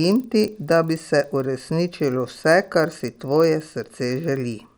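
Resampler restarted on every block, running through the whole clip: the audio was converted in separate 40 ms chunks, with each chunk's filter starting fresh, so the samples at every chunk edge were computed without their true neighbours. That leaves a small error at each boundary, repeating 25 times a second, heard as a low, rough buzz riding on the speech and dropping away in pauses. The conversion was from 24 kHz to 48 kHz.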